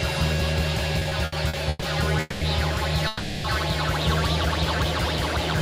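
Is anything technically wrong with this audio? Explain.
Yes. From 0.99 to 1.84 s there are repeated stalls (stutter). Packets arrived late six times and the jitter buffer emptied each time. The receiver stretched the last sound to cover about 310 ms, roughly a third of that stretch, with the longest hold 130 ms. Nothing is lost, but the audio drags and judders.

Two call audio freezes follow, at 2.20 to 2.43 s (210 ms) and 3.07 to 3.46 s (370 ms). Each time the sound hangs as a continued, fading buzz or hiss without dropping to silence, then resumes where it stopped, later by that amount. The likely cause is packets held up in transit, draining the buffer.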